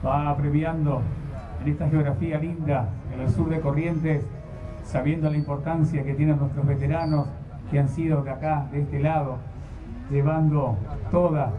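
Nothing stood out on listening to this clip.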